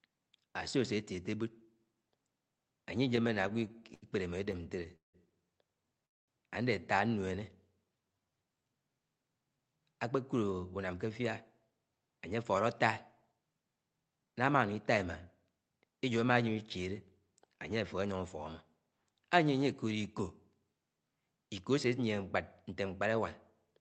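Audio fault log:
3.09–4.04 s and 4.44–5.15 s, repeated stalls (stutter): packets kept arriving late, so the jitter buffer ran dry 14 and then 8 times, and the receiver stretched the last sound to fill each wait, longest 81 ms, then 175 ms. The audio drags and stutters, with nothing lost.
6.05–6.30 s, call audio freeze: the jitter buffer emptied, likely because packets were held up in transit, and the audio stops for about 220 ms of silence before resuming where it left off. A gap is inserted and nothing is missing.
10.37–11.20 s, 11.70–12.66 s, 13.32–15.07 s and 15.48–15.99 s, jitter buffer speed-up: with too much audio queued, the receiver trimmed many small pitch-period slices, about a tenth of a second in the first two stretches, a fifth in the third and less in the last. Playback runs at 110–112% speed with unchanged pitch, sounding hurried.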